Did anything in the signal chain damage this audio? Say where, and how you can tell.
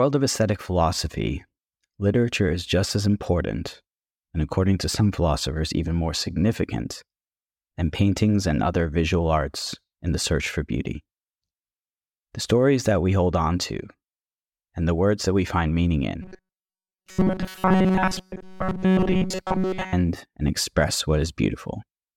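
Yes. From 16.22 s to 19.93 s the speech collapses into a rigid, metallic buzz pitched at 188 Hz. It still roughly tracks the rhythm of the talker, and essentially all of that stretch sounds synthetic. This is robotic sound from repeated short buffers, most likely at the driver or buffer stage. When fresh audio arrives too late, a fragment of about 5.3 ms is looped in its place, and that loop length imposes the fixed 188 Hz tone.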